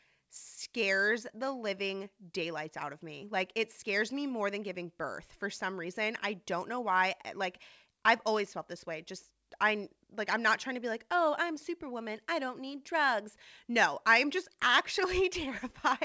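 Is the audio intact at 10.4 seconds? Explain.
Yes, the audio is intact at 10.4 seconds, with nothing there beyond the ordinary character of the call path, whose G.722 coding leaves the sound band-limited with nothing above 8 kHz.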